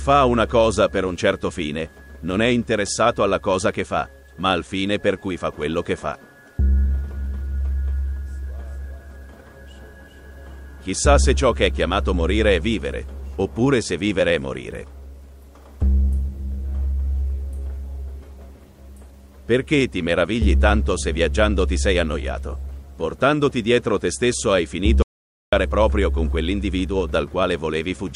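Near the end, at 25.02 s, the audio drops out to silence for about half a second, coming back at 25.53 s. The gap is silent with no room tone, and whatever played there is gone, likely a momentary input loss like a disconnect or stray mute.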